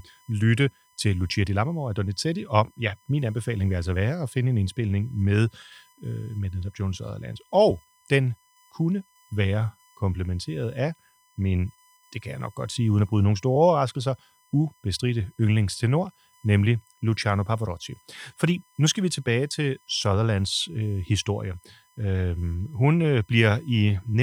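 Running under the speech for the whole clip there's a thin, steady tone sitting right at 1 kHz, which is classic USB whine. The bus pulls current in 1 ms frames, and that rhythmic draw is leaking into the audio through the power or ground, so you get a fixed-pitch whine at the frame rate. It's quiet, roughly 40 dB below the speech, and it never moves in pitch.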